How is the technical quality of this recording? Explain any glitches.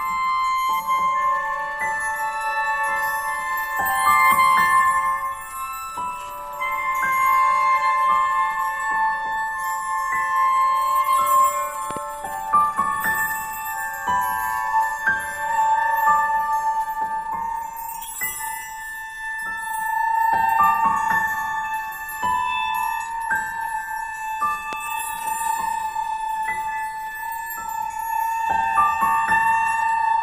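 The recording has two loud pops. A double pop comes at 11.91–11.99 s, and a single one at 24.73–24.75 s, each peaking roughly 10 dB above the sound, which continues beneath. They're likely voltage pulses from a plug, switch or static, and they show as tall waveform spikes and thin, full-height spectrogram stripes.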